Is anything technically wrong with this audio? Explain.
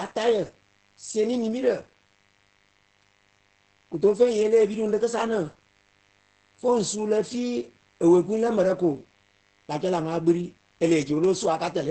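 Yes, two faults run through the whole speech clip.

Mains buzz sits under the audio from start to end. Sharp switching spikes tied to the 50 Hz supply leak in twice per cycle, spraying harmonics up into the kilohertz range. The result is a steady, raspy buzz at a low level, roughly 40 dB below the speech.

Opus voice compression is also present throughout. The SILK linear-prediction coder, running at a very low rate that points to around 10 kbps, codes the excitation coarsely and leaves nothing above about 8.6 kHz. The speech comes out muffled, hoarse and slightly robotic.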